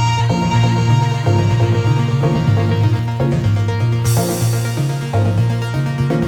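From 0.51 to 2.99 s a doubled audio track appears: a full-band copy trails about a third of a second behind, roughly 5 dB quieter, likely from a second, slower capture path.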